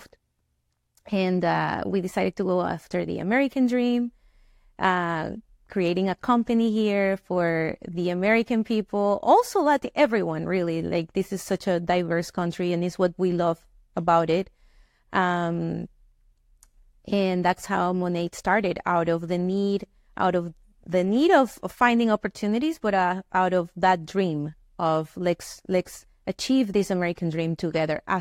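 No technical faults can be heard anywhere in the recording.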